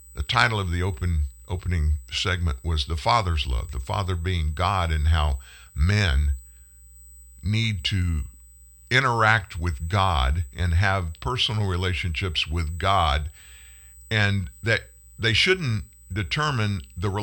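Throughout the speech runs a USB whine, a steady fixed-pitch tone at 8 kHz, roughly 30 dB below the signal, from USB microframe current leaking through power or ground. A spectrogram shows an unbroken horizontal line at 8 kHz beneath the speech.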